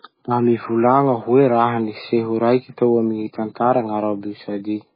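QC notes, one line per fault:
throughout, MP3 compression: the encoder was likely starved of bits, at a rate that fits roughly 16 kbps. It cuts all treble above 5 kHz and lets weak frequency lines flicker frame to frame, so the speech sounds dull, heavily watery and swirling, with smeared attacks.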